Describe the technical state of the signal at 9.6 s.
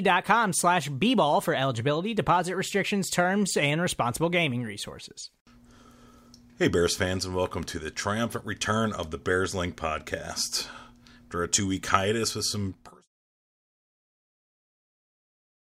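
At 9.6 s the speech signal is intact, with no audible technical fault at that point.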